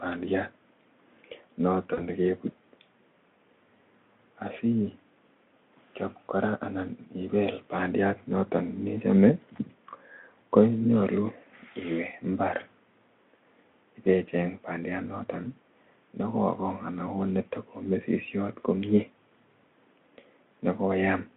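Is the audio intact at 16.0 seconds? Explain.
Yes, the speech is intact at 16.0 seconds, with no audible fault at that moment beyond the narrow 200 Hz to 3.5 kHz line band of the Speex path.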